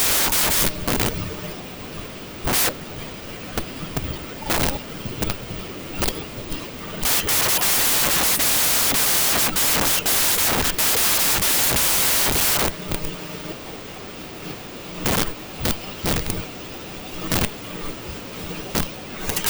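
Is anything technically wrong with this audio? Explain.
Yes, there's a wrong sample width problem running through the whole clip. The speech was stored as 16-bit integers but is being read as packed 24-bit, so every three bytes get treated as one sample. That grouping straddles the real sample boundaries, and many values end up built from mismatched bytes, which comes through as loud noise. The speech is buried underneath, playing 1.5 times too fast and pitched up to match.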